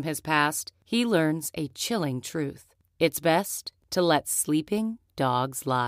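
Overlapping chunks appear at 1.70–1.73 s, between "past he learns a" and "chilling truth", and again at 3.73–3.75 s, just before "to let". The speech was handled in 2.0 s chunks, and each new chunk began slightly before the previous one finished, so the same 23 ms of audio plays twice at every join. Each seam is heard as a brief click or stutter, recurring at the 2 s chunk interval.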